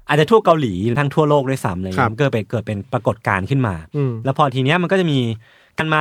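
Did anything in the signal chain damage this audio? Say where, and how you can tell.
Yes. The fault is damaged data in a compressed stream, at the codec stage. Two short blips break the speech, at 0.93 to 0.97 s and 5.76 to 5.81 s, each about 40 ms. Corrupt bytes made the decoder misread frames and lose sync.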